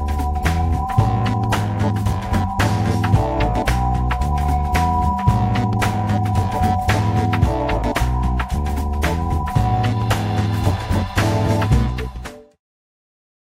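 No technical faults can be heard in this audio. Near the end the level eases down in a smooth fade-out, beginning at roughly 11.5 s and reaching silence by 12.62 s with no click or hard edge.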